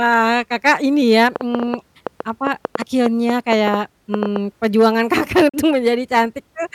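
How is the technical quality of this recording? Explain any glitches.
The recording has two clear glitches: a stretch of ticking in the middle and a brief hole in the sound near the end.

From 1.36 to 4.37 s, starting just after "ini ya", a train of clicks sits on top of the speech. It is a run of sharp, similar-sounding pops, roughly twenty of them at an uneven pace averaging 6.7 per second. They stand out sharply, around 10 dB above the speech, and keep going through the pauses. The likely cause is an outside pulse source, such as interference from nearby equipment or a faulty connection or power supply, repeatedly injecting the same spike into the signal.

At 5.49 to 5.54 s the sound cuts out for about 40 ms, then returns as if it had carried on during the gap, so that stretch of sound is simply missing. This is likely a Bluetooth dropout: audio packets failed to reach the headphones in time and were discarded, leaving silence until valid data arrived. 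The length of the gap fits two lost packets.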